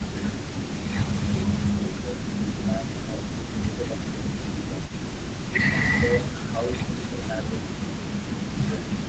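Right from the start, and again from 1.03 to 4.91 s and 5.91 to 8.97 s, the talker dips by up to about 15 dB and breaks up. That's speech suppressed in double talk, likely an echo canceller turning everything down while both sides spoke. Underneath, from 0.0 to 5.58 s and from 6.19 s to the end, there's a faint copy of the voice trailing about 242 ms behind, roughly 20 dB down. That's an echo leak, likely an echo canceller letting some loudspeaker pickup slip back into the call.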